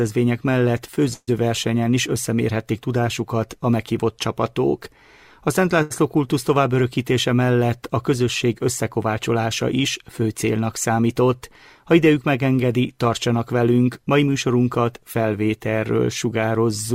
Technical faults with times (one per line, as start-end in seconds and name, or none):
1.13-1.29 call audio freeze
5.82-5.92 short stall from a late packet
10.62-11.22 jitter buffer speed-up
13.71-14.28 jitter buffer speed-up